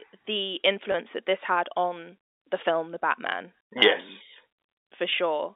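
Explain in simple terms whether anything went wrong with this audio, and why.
Packet loss with pitch repetition occurs twice, at 0.92 s (just before "that this had on") and at 5.1 s. Each time, a 20 ms packet was lost. Instead of going silent, the voice briefly holds with a buzzy repeated pitch.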